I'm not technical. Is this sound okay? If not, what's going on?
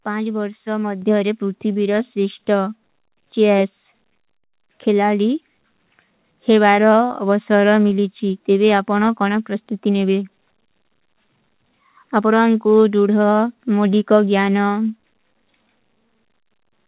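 No. At about 1.02 seconds, just before "ପୂର୍ଥୀ ଵିରସ ସିଷ୍ଟା", the microphone volume is stepped up: the call software boosts the mic at once, so the voice and background suddenly get louder together. The audio also has that narrow phone-call sound, because the call path drops everything above 4 kHz.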